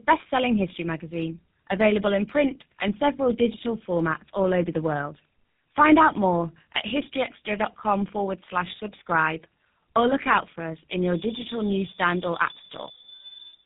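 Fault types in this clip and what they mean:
Tandem speech coding: rough, muffled, warbly speech with nothing above 3.8 kHz, from two speech codecs in a row, G.729A then GSM full rate, the second recoding the first's degraded output.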